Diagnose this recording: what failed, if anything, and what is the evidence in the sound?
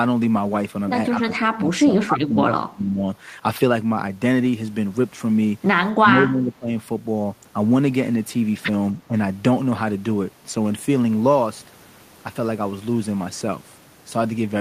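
Call processing: speech dips by up to about 25 dB at 1.19–3.03 s and 5.94–6.69 s, briefly at 9.08–9.15 s. This is likely speech suppressed in double talk, with the echo canceller attenuating the near talker during overlap.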